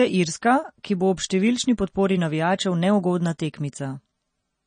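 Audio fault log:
throughout  MP3 compression: treble stops at 9.4 kHz and the sound is plainly watery, likely from MP3 encoding at a low bitrate near 32 kbps.
0.83 s  pre-echo: a hiss about 11 ms long smears ahead of a sharp onset, as quantisation noise spread across the block fills the quiet before it.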